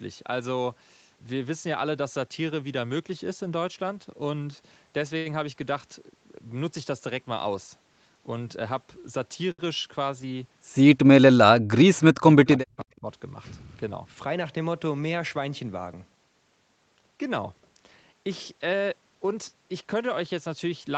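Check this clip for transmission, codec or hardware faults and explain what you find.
Four kinds of fault are audible in this speech: two short stalls, a stretch of double-talk suppression, a brief echo leak, and two jitter-buffer speed-ups. The audio stays band-limited at 8 kHz throughout, as expected from the call path.

Short stalls from late packets at 5.17–5.28 s and 9.51–9.62 s: A packet arrived late, so the jitter buffer ran dry, and the receiver stretched the last sound for 81 ms and then 70 ms before resuming where it left off. Nothing is lost, but a sound hangs on unnaturally with a faint buzz or dip.

Speech suppressed in double talk, 11.45–13.07 s: The echo canceller most likely mistook simultaneous talking for loudspeaker echo and clamped down on the near talker. Across about a second of that span, the speech dips, falling by roughly 40 dB at its deepest.

Echo leak around 12.79–12.84 s: Residual loudspeaker pickup was likely not fully cancelled and went back down the line. 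A faint, delayed copy of the speech surfaces about 326 ms late, sitting about 35 dB below the direct signal, as a brief scrap.

Jitter buffer speed-ups at 13.92–14.35 s and 18.78–19.48 s: The buffer held more audio than it targets, so the receiver trimmed pitch-period-sized slices repeatedly, removing roughly 70 ms and then 100 ms. Speech runs at 112% and 113% speed with unchanged pitch, sounding briefly rushed.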